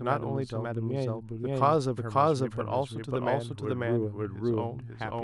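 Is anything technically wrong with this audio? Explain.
Yes. Throughout the speech there is a doubled audio track: a second, out-of-step copy of the same signal, likely from a slower capture path or a misaligned edit, is mixed in. It trails by about half a second at roughly equal level, so every syllable repeats as a clean, dry echo.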